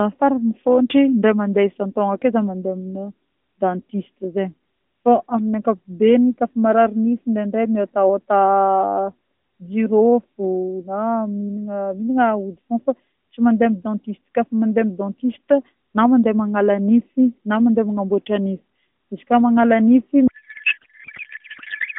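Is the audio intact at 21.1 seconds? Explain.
No. From 20.28 s to the clip's end, a codec payload misread turns the AMR speech into garbled warble that barely follows it, consistent with octet-aligned frames decoded as bandwidth-efficient; unlike packet loss, there are no gaps.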